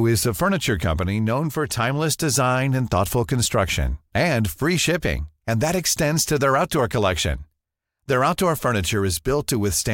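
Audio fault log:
No faults detected in this speech recording.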